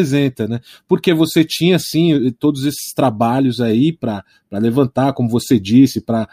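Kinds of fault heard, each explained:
Nothing stood out on listening to this speech recording.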